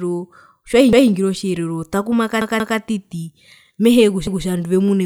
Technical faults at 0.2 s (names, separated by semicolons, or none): none